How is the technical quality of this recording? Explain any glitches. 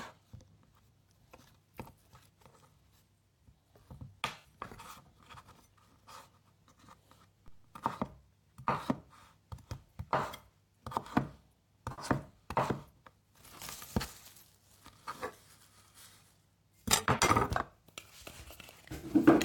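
The recording has two kinds of glitch: three short patches of AAC frame loss with concealment and a single DC step.

AAC frame loss with concealment occurs at 4.38 to 4.47 s, 11.91 to 12.05 s and 18.95 to 19.09 s. Each time, compressed frames went missing and the decoder patched the gap by reusing the last good spectrum. The gaps are about 64 ms, 64 ms and 85 ms, which fits three or four lost frames. They are too short to fade out and are heard as brief smeared, noisy patches.

A DC step occurs at 7.48 s. The waveform's zero line jumps abruptly, as when an offset input is switched in. It is heard as a single low thump or click while the sound carries on unchanged. The offset then drains away, as if through a 2 Hz high-pass.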